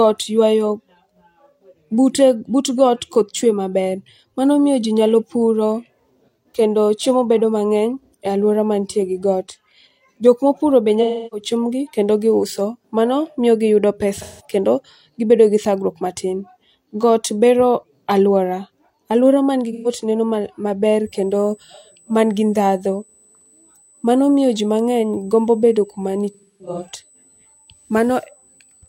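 At 11.02 s, just after "puro be", AAC frame loss with concealment begins. The decoder lost about 0.3 s of frames and rebuilt the gap from the last good spectrum. The speech smears into a noisy, phasey patch until "chiembgi kendo giuso mano" at 11.47 s. The same fault returns at 14.16 s, after "giuso mano miyo giyudo", for 0.17 s. It recurs at 19.72 s for 0.13 s. A fourth loss spans 26.30 to 26.88 s. It is scattered over about 0.5 s, with the longest run around 0.3 s, and sounds broken and washy.

From 21.06 s, after "neno maler", USB whine sets in and lasts to the end. Current drawn in 125 microsecond microframes leaks through power or ground. The result is a fixed tone at 8 kHz. Its strongest component sits at 16 kHz. It is roughly 35 dB below the speech. It is a thin, high whistle.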